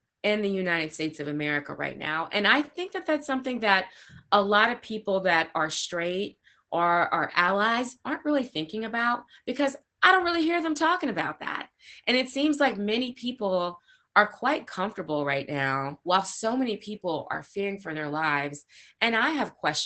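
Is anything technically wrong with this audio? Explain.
Yes. Opus voice compression runs throughout: a SILK coder coarsely models the speech excitation, which fits about 12 kbps, leaving it muffled and hoarse. A spectrogram shows nothing above 8.8 kHz.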